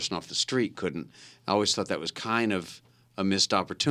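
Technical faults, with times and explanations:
No technical faults can be heard in this speech clip.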